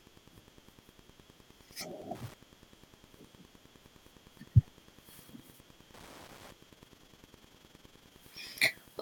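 Wi-Fi interference runs through the whole recording: a steady ticking repeating every 102.4 ms, just under ten times a second, sitting roughly 20 dB below the speech. A nearby Wi-Fi radio's periodic beacon transmissions are being picked up by the audio circuitry and rectified into the audio band, so each beacon lands as a short click. Because the beacon interval is fixed, the ticks keep a rigid, machine-like rhythm regardless of what the speaker is doing.

From 6.69 s to 8.14 s an overlap-add ripple appears. The audio was split into windowed frames and reassembled with an overlap whose window gains do not add up to a constant, so the level dips and recovers once per frame. The modulation is about 6 dB deep at around 20 cycles per second, which puts a rough tremolo on the speech for that stretch and gives it a fast, fluttering quality.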